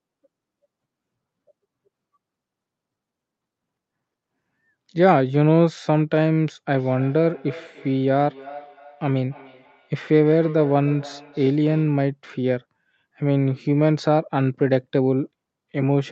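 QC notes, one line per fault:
6.75–12.07 s: feedback echo between two devices. The speech returns roughly every third of a second, about 19 dB down, because another device replays this microphone's signal and it is picked up again. The spectrogram shows faint, evenly spaced copies trailing each syllable, and the waveform shows small repeating bursts.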